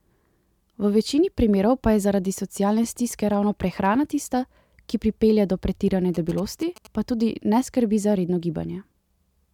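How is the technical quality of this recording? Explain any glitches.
There's one glitch worth flagging: GSM signalling bursts from 6.15 to 6.87 s. A 2G phone close to the recording gear was sending short bursts of radio activity, the kind it sends while signalling rather than carrying a call, and the audio circuitry rectified them into sound. You hear a galloping dit-dit-dit of short 217 Hz buzzes, sitting about 20 dB below the speech and lasting under a second.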